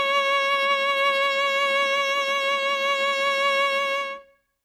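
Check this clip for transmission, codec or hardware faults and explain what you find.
No faults are audible anywhere in this music.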